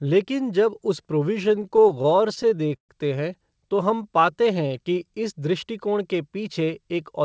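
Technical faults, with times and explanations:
1.44–2.91 s, repeated stalls (stutter): right after "लेकिन जब उस" and up to "हैं तो", the speech halts and restarts 21 times. Packets arrived late or slower than playback, so the jitter buffer kept running dry, and the receiver stretched the last sound to cover each wait, fading it during the longer ones (up to 129 ms). About 322 ms of filler occupies 22% of the span. Nothing is lost, but delivery drags and stutters.
3.84–5.12 s, jitter buffer slow-down: between "हैं तो" and "इस दृष्टिकोण के", the speech runs at about 88% speed with unchanged pitch. The buffer was rebuilding its reserve, so the receiver repeated single pitch periods and fragments of pauses many times in a row, adding 160 ms. Vowels sound drawn out, a time-stretch rather than gaps.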